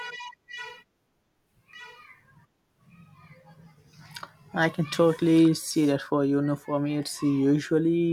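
A second copy of the speech, likely from a slower capture path, is mixed in from 1.73 to 5.47 s: a doubled audio track trailing about a second behind, somewhat quieter, ending abruptly before "see that for you".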